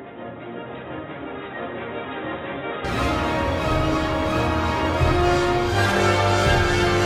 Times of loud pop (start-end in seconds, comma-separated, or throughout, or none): none